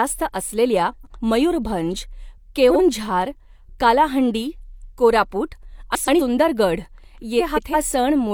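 Speech with four brief garbled flutters at 0.91–1.19 s, 2.70–2.81 s, 5.95–6.21 s (just after "कालाहंडी कोरापुट") and 7.39–7.74 s. These are frames out of order: two adjacent blocks of about 43 to 171 ms play swapped, with no time lost.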